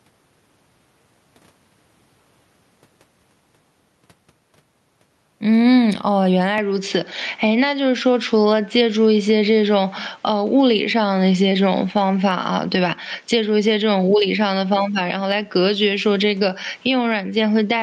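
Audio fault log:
throughout gain pumping. The level of the speech swings by about 15 dB. Loud and quiet passages sit close together, so the speech sounds squashed. The likely cause is input gain set far too high, with a fast limiter or compressor pulling the level down on every peak and releasing it in the gaps.
6.58 to 17.83 s input switched to a poorer device. From 6.58 s the tone changes abruptly, with no gap at the switch. Nothing comes through above 7.6 kHz, so the speech turns duller and boxier. The level shifts by a few decibels. A new, faint noise floor appears, far below the speech. This likely comes from the system moving to another microphone or a headset's call profile partway through, which passes a narrower band and brings its own tone and noise.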